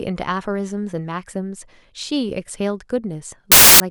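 At 3.52 s the speech gives way to a burst of very loud white noise lasting until 3.80 s: file tags played as audio, here compressed cover-picture data read as samples. Its abrupt hard edges and flat, patternless hiss distinguish it from clipping or codec distortion, which still follow the sound.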